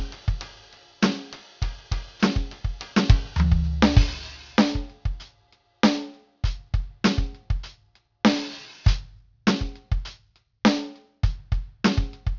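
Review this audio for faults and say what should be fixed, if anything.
Aliasing runs through the whole music clip. High content folds back below a hard 6 kHz edge as unrelated, gritty, metallic tones, roughly 15 dB under the music. That fits a downsample from 48 kHz to 12 kHz with no low-pass filter applied first. To prevent it, resample from the original with an anti-aliasing filter below 6 kHz, or keep a higher output rate.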